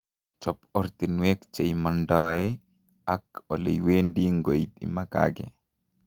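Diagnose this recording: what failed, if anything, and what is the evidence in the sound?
The network stage failed, with two bursts of packet loss in this speech clip. The first runs from 2.17 to 2.26 s, right after "ortinwek che"; the second from 4.03 to 4.12 s. In each, the receiver had nothing to play for about 60 ms. Concealment extended the last sound for about 60 ms as a held, fading buzz or hiss. Playback then resumed with about 60 ms of speech missing.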